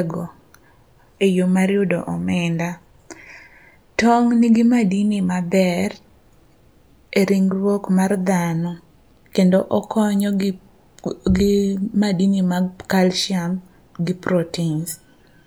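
No technical faults can be heard anywhere in the recording.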